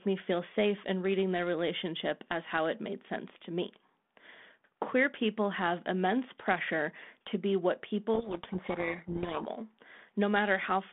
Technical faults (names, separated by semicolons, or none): codec payload misread